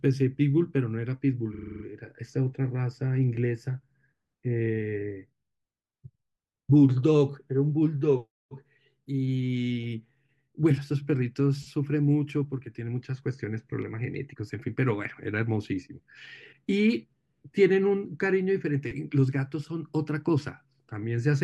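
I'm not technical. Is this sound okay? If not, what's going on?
No. There is a fault called repeated frames, from 1.54 to 1.83 seconds. A tiny piece of the speech, about 43 milliseconds long, plays again and again, eight times in all. That sounds like a quick stutter. The piece's length fits two compressed frames being stored or sent more than once. The repeats make the clip about 0.3 seconds longer.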